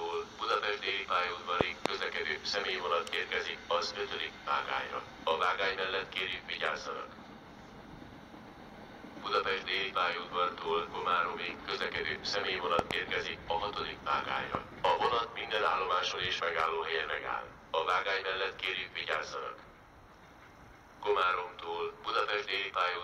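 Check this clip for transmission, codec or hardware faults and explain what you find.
There are hardware faults: three loud pops. A sudden voltage step, likely from a plug, switch, static discharge or driver glitch, enters the signal path. Each is heard as a sharp pop over the continuing sound: a pair at 1.61–1.88 s, peaking about 25 dB above the audio; another pair at 12.79–12.93 s; and a single pop at 14.55–14.57 s, both about 20 dB above.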